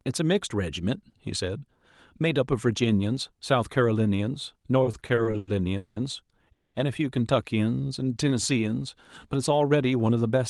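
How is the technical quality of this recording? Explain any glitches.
The recording has four network-timing glitches from about 4.8 s onward, all heard over call-grade audio that rolls off above 12 kHz.

From 4.83 to 5.98 s there are repeated stalls (stutter): nine short gaps, the longest 190 ms, as the jitter buffer kept emptying. About 430 ms of continued sound is inserted and nothing is lost. The speech drags and stutters, and the many small hitches set it apart from a single freeze.

From 6.52 to 6.76 s comes a call audio freeze, likely from a 220 ms packet delay. The last sound is carried on briefly, then about 180 ms is silent before the speech resumes intact. Unlike the stutter, it is one long stop.

From 7.81 to 8.30 s a jitter buffer slow-down repeats pitch periods to rebuild reserve, adding 68 ms. The speech plays at 88% speed at unchanged pitch, drawn out rather than lowered.

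From 10.09 to 10.38 s a jitter buffer speed-up trims pitch periods to reduce the delay, removing roughly 40 ms. Playback runs at 112% and sounds hurried, while the pitch stays unchanged.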